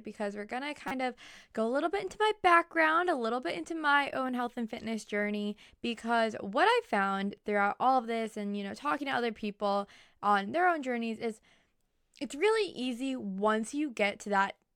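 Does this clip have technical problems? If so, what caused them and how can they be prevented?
Yes. A corrupt frame decoded appears at 0.88 to 0.92 s, a short glitch lasting roughly one compressed frame. Flipped bits in that frame made the decoder apply wrong gains or misread spectral codes, so energy landed at frequencies where the speech has none. On a spectrogram it shows as an isolated vertical smear or stray bands that break from the surrounding harmonics. Prevention: protect the stream with checksums and let the decoder conceal or drop damaged frames instead of playing them.

Sample clock jitter runs from 8.04 to 11.24 s as a fine hiss and roughness that clings to the speech, strongest on loud and bright passages and gone in the pauses. The converter's clock wandered by something around a microsecond, so samples were taken slightly off time. The error scales with how fast the waveform is changing and sits roughly 45 dB below the signal. 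A spectrogram shows a raised noise floor in the high frequencies only where speech energy is present, while the waveform looks normal. Prevention: clock the converter from a clean, low-jitter source.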